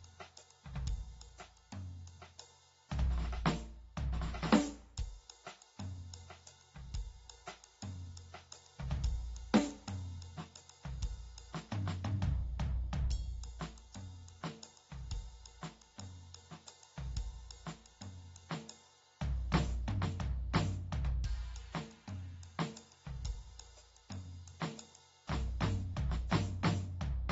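Throughout the music, nothing is present above 7.7 kHz. The top end is dull and smeared, with a warbling, fizzy texture on sustained tones. This is plainly audible AAC compression, likely from AAC-LC at a bitrate fitting 24 kbps, where coarse quantisation lowers the cut-off.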